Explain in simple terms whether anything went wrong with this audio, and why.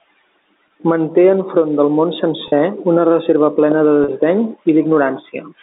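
Three brief glitches: at 0.68 s, from 2.48 to 2.52 s just after "enfront del món", and from 4.04 to 4.08 s right after "una reserva plena de". Each sounds like the sound briefly snagging into a slightly held, buzzy tone before carrying on. This is packet loss with pitch repetition. Small chunks of audio went missing in transit, about 20 ms at 0.68 s and about 40 ms at the other two. The receiver filled each gap by repeating the last short cycle of sound.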